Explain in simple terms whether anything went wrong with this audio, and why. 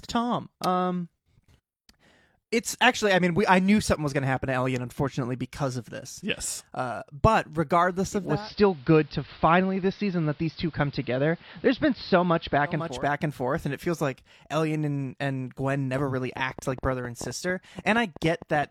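Two things went wrong. From 8.06 to 13.10 s, just before "and forth and it", the radio lost its digital signal and fell back to the AM broadcast of the same station. This is a digital radio blending to analogue. Over about half a second the sound fades across to a duller version. A faint hiss comes in and the level shifts slightly. At 13.10 s the digital sound returns.

Near the end, from 15.96 to 18.64 s, a train of clicks runs over the speech. The likely cause is electrical interference from nearby equipment or a faulty connection or power supply, sending short sharp pulses into the signal. You hear about thirty similar ticks, roughly nine per second, at an uneven pace. Some jump out louder than the speech itself.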